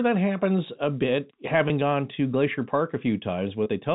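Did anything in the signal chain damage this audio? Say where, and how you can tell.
Yes. There is packet loss with pitch repetition at the network stage, at 1.68–1.70 s (between "that happens a bit" and "gone to glacier park") and at 3.64–3.66 s. Each 20 ms gap, which fits one lost packet, was bridged by repeating the last pitch period. It sounds like a brief, slightly buzzy hold.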